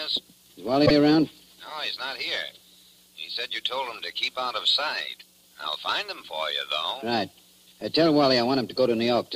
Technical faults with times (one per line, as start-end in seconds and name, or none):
0.85-0.93 repeated frames